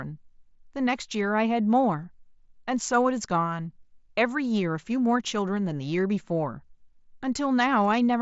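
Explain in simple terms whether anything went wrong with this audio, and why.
Nothing went wrong with this speech recording. It came through a Bluetooth headset using the mSBC codec, so there is no sound above about 7.7 kHz and a faint graininess typical of that link.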